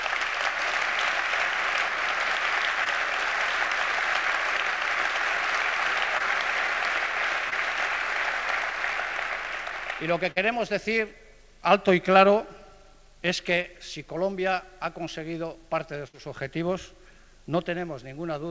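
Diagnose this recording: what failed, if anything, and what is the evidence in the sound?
Network stage: short concealed packet loss at 2.84, 6.18, 7.50 and 13.62 s. Each time about 20 ms never arrived, and the receiver extended the preceding sound, leaving a brief smear or wobble.

Network stage again: a burst of packet loss at 10.31 to 10.38 s and 16.08 to 16.15 s dropped 40 and 60 ms. Concealment stretched the last sound into a fading buzz or hiss before the audio resumed further on.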